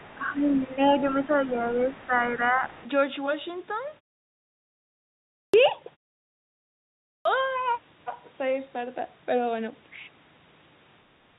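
A speech clip over a narrowband call path, with nothing above 4 kHz, which points to G.711 at 64 kbps, and three kinds of fault. The other side's voice leaking through is heard at 0.0 to 0.17 s, 0.55 to 0.78 s and 1.25 to 2.88 s, a second, faint voice about 25 dB under the talker. Its likely cause is loudspeaker sound reaching the microphone that the echo canceller failed to remove. Unlike background noise, it carries its own speech rhythm. Speech suppressed in double talk overlaps those stretches: the talker dips by roughly 10 dB from 0.17 to 0.71 s, and again around 2.06 to 2.13 s, and by roughly 5 dB at 1.27 to 1.53 s and 2.52 to 2.62 s. This is likely the canceller ducking everything while both sides speak at once. It differs from a network dropout in that it tracks the competing voice. Clipped start after a pause occurs twice. At 5.48 s, after a 1.56 s silence, about 56 ms of onset is swallowed, and at 7.2 s, after 1.32 s, about 53 ms goes. 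Speech begins abruptly, missing its first sounds, likely because the output device is waking from sleep. Muted pauses, by contrast, only fade the background and never eat into the speech.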